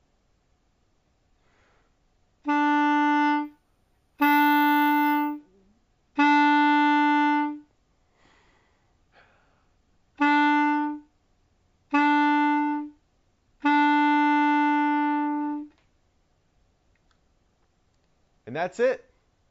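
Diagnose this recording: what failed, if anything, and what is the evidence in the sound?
The failure is in sample-rate conversion: imaging from sample-and-hold upsampling between 3.45 and 5.38 s. A metallic fizz sits about 20 dB under the sound across 8 to 16 kHz, tracking its level. That fits 16 kHz material held-and-repeated up to 48 kHz without an interpolation filter.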